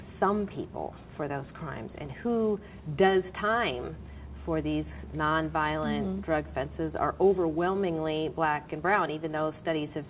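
There are no technical faults to describe in time order; the audio carries nothing above 4 kHz, which fits a G.711 mu-law call path working as it should.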